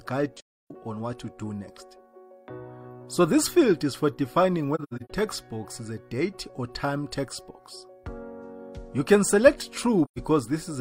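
Three soft-edged silences occur, at 0.37–0.71 s, 4.75–5.10 s (several short gaps, the longest about a tenth of a second) and 10.05–10.18 s. This is AAC frame loss with muting: lost frames decode as silence, and overlapping windows fade in and out rather than clicking like a hard dropout.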